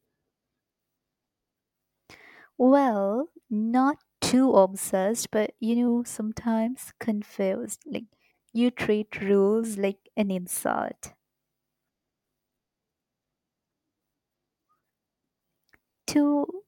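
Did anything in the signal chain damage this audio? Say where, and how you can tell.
Yes: a drift correction step, likely in buffer clock matching, slowed playback 5.4% from 5.88 to 6.67 s after "too obsessed but you", dropping pitch nearly a semitone, then snapping back.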